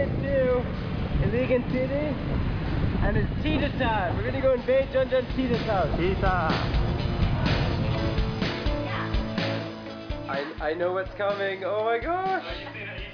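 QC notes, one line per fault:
No faults detected.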